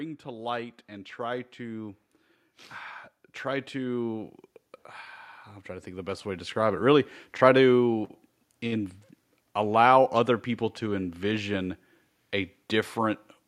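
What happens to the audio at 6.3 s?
The speech and the background swell up together by about 5 dB from 5.65 to 6.84 s, just before "try to in": automatic gain rising, as the gain control lifts quiet input.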